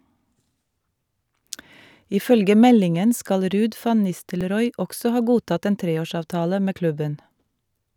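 The speech was handled in 3-second chunks that each began about 7 ms before the previous one ended. These overlapping chunks replay that sliver at every join, giving brief clicks or stutters at 1.40 s, 4.41 s (just before "også ha godtatt en") and 7.41 s.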